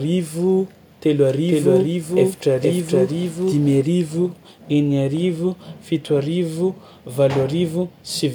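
From 1.48 to 3.80 s there is a doubled audio track. An equally loud full-band copy trails about half a second behind, likely from a slower second capture path or a misaligned edit. It starts and stops abruptly with no decay, and the spectrogram repeats every pattern at that offset.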